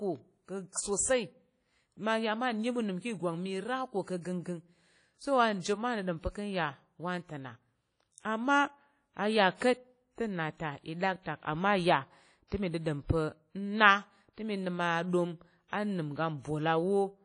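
Throughout the speech, plainly audible washy ringing is likely WMA compression, fitting a rate near 32 kbps; a spectrogram shows nothing above 10.1 kHz.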